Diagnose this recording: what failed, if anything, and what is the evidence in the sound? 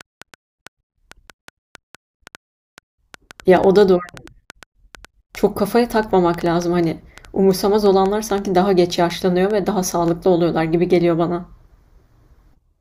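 A train of clicks runs from 0.01 s to 10.09 s: about 40 similar pops at roughly four per second, spaced irregularly, peaking a few dB above the speech and audible through pauses. Similar shapes repeating at about four per second, unlike random crackle, point likely to interference in the analogue wiring.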